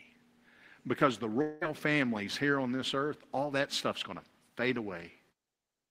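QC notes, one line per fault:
1.41 to 1.63 s, long network dropout: the speech smears into a fading, buzzy or hissy continuation of the last sound for about 0.2 s, then picks up at "families here on this" with a chunk gone. Likely lost packets, papered over by the receiver.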